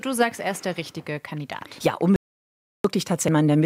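At 2.16 s the input feed to the recorder was likely lost, through a disconnected device or a failed link, while writing carried on with silence. The result is an audio dropout to silence: the sound cuts off abruptly into dead, roomless silence until 2.84 s, and about 0.68 s of material is simply gone.

At 3.28 s a stretch of damaged data in the compressed stream throws the decoder out of step. It misreads the corrupted frame and hunts for the next valid header, producing a glitch in the sound.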